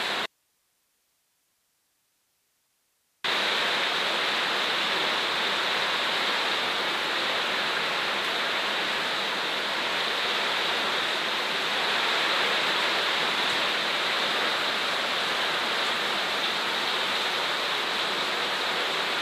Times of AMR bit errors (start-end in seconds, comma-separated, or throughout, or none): none